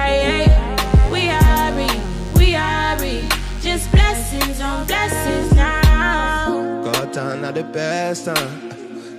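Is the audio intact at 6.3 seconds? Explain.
Yes, the audio is intact at 6.3 seconds, with no dropout, click, distortion or other fault to be heard at that point.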